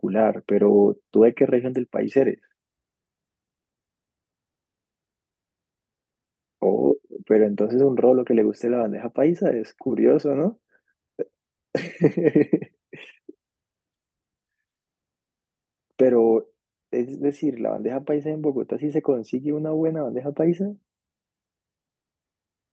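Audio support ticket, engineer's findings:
Engineer's findings: no fault found in the speech clip, which came through the WebRTC call path with Opus at 32 kbps and an 8 kHz audio bandwidth.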